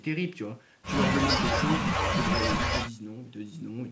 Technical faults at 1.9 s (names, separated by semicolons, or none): none